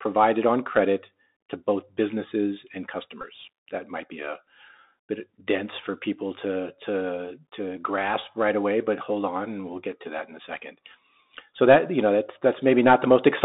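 Throughout, the Bluetooth CVSD headset codec band-limits the speech to roughly 200 Hz to 3.7 kHz, with grainy hiss and scratchy sibilants; spectrograms show nothing above 4 kHz. From 3.21 to 3.25 s, a Bluetooth headset packet repeated run fills about 19 ms, which fits about five lost packets, with a buzz near 267 Hz that appears as identical waveform blocks spaced 3.75 ms apart.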